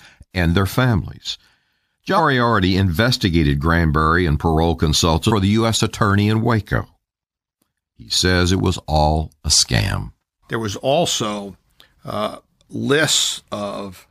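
At 2.16 to 2.20 s, compressed frames are skipped: a few whole frames, about 46.4 ms each, are missing or rejected by the decoder, so roughly a fifth of a second of speech vanishes and the audio jumps forward.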